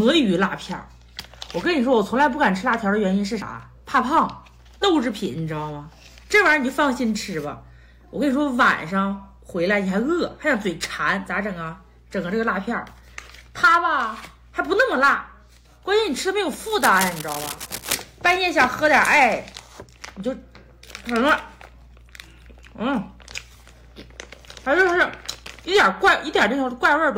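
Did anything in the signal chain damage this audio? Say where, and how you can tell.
Yes, there's a stretch of cable scratch noise from about 16.65 to 17.95 s: a dense, ragged burst of crackle riding roughly 10 dB under the sound. That points to the analogue wiring, likely a worn lead or connector being moved, its contact resistance jittering.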